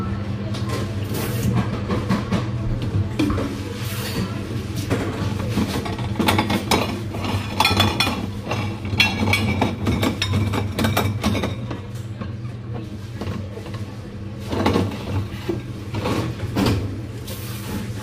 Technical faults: damaged data in a compressed stream

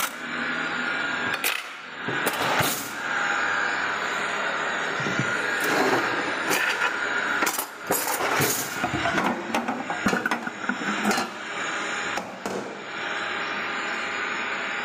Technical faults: gain pumping

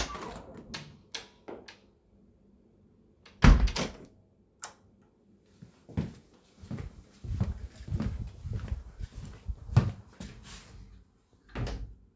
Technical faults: none

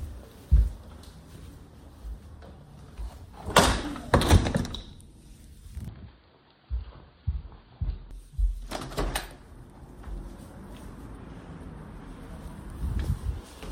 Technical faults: input switched to a poorer device

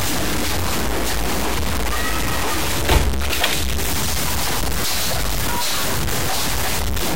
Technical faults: low bit depth without dither

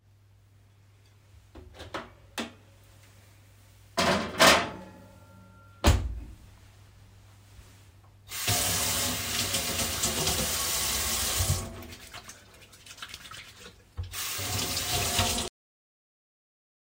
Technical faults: cut-off end

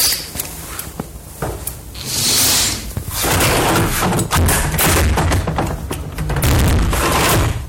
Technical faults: hard clipping

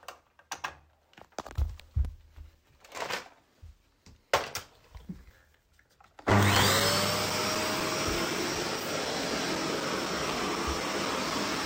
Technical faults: periodic USB or driver dropouts

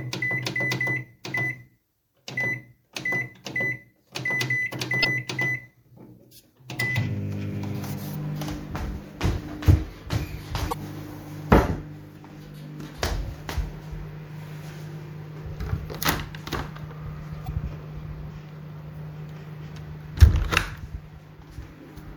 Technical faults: damaged data in a compressed stream

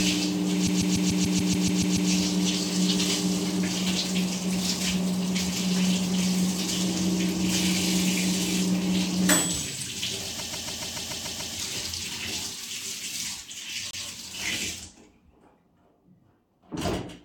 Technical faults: repeated frames

